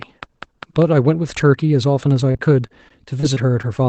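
From 0.02 to 0.83 s a train of clicks ticks at a regular 5 per second, about five pulses peaking around 10 dB above the speech, likely from interference. From 2.31 to 3.80 s repeated packet loss leaves short holes, the longest 30 ms, patched by extending prior sound. About 11% of the stretch is concealed, so speech turns choppy and robotic within audio band-limited to 8 kHz.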